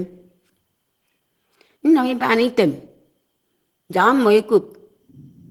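Throughout, the speech sounds muffled, hoarse and grainy, with plainly audible damage, likely Opus compression running its hybrid speech mode at a low rate consistent with about 16 kbps.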